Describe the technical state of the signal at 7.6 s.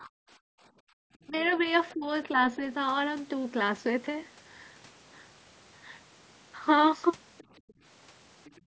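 At 7.6 s, a faint second voice sits under the talker from 7.38 to 7.73 s. It is likely the other side's voice leaking through: the loudspeaker's output reached the microphone and the echo canceller left a residue. It is very quiet, far below the speech.

Background gated by the echo canceller overlaps it, from 7.51 to 7.78 s. The canceller clamped the microphone down hard while the loudspeaker played. The room sound dips by about 33 dB, for roughly a tenth of a second in total, then returns.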